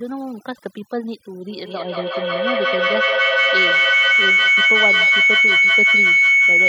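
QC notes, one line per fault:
throughout, overdone noise removal: the background sits at near silence, speckled with twinkling artefacts. A noise reduction stage pushed too hard is cutting individual frequency bands whenever they approach its noise estimate, removing the softer parts of the speech along with the noise.
1.5 to 6.68 s, feedback howl: a piercing tone around 2 kHz swells until it peaks about 11 dB above the speech, repeating roughly every fifth of a second and still sounding at the end. A microphone-to-loudspeaker loop is gaining level on each pass and narrowing onto its favoured frequency.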